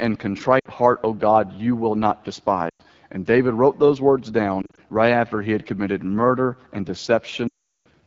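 Speech coded with the AMR wideband (HD Voice) codec at a very low rate, which fits the 8.85 kbit/s mode, leaves too few bits for the pulse excitation, so the voice sounds rough and raspy throughout, with a thin, noisy top end. Lost AMR speech frames, where corrupted frames forced the decoder to repeat its last good pitch and vocal tract settings at falling gain, cause audible drops to near silence at 0.60–0.68 s and 2.70–2.82 s (just after "you will not"). Between "wrote those words" and "right after he had", short scattered losses from 4.62 to 4.79 s make the sound flutter. The longest run, 7.48–7.86 s, drops the sound quickly to near silence before it returns weak and rough.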